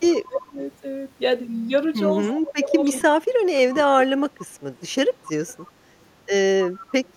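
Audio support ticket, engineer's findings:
Echo leak at 0.10–0.17, 2.84–3.03, 3.74–3.79, 5.23–5.28, 5.47–5.62 and 6.70–7.11 s. Faint copy of the speech 268 ms late, about 20–30 dB down. Likely far-end echo canceller not fully cancelling loudspeaker pickup. Spectrogram: weak, time-shifted ghost of the formant pattern.

Speech suppressed in double talk at 0.25–0.57 s and 2.27–4.11 s. Level dips by up to about 20 dB and about 25 dB, roughly 0.3 s and 1 s affected. Likely echo canceller attenuating near-end talker during overlap. Waveform: envelope notches.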